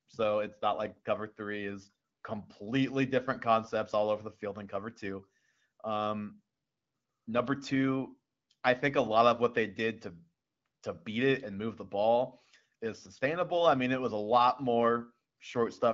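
The speech shows no technical faults, carried over the AMR wideband (HD Voice) codec at one of its higher rates, with the band above 6.4 kHz filled in by the codec as designed.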